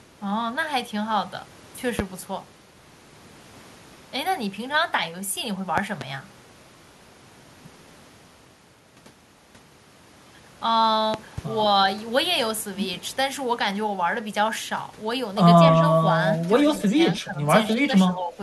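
A speech recording carries loud pops at 1.99 to 2.02 s, 5.78 to 6.04 s (a double pop), 11.14 to 11.41 s (another double) and 15.68 to 15.70 s, each peaking about 20 dB above the speech. They are likely voltage pulses from a switch, plug, static or driver glitch. On the waveform they show as tall spikes and on a spectrogram as thin full-band vertical stripes. Near the end comes echo leak, at 16.78 to 16.82 s and 17.65 to 17.73 s. There a faint copy of the voice trails it by 155 ms, about 20 to 25 dB down, likely far-end loudspeaker sound the echo canceller failed to remove. A spectrogram shows it as a weak ghost of the speech pattern shifted 155 ms later. The speech is also suppressed in double talk at 16.84 to 16.97 s, 17.20 to 17.47 s, 17.76 to 17.90 s and 18.09 to 18.38 s. The level sinks by up to about 10 dB, only about 5 dB in the third dip, likely because the canceller turned its own talker down along with the loudspeaker echo while they overlapped. 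This appears as notches in the waveform envelope and fainter spectrogram bands.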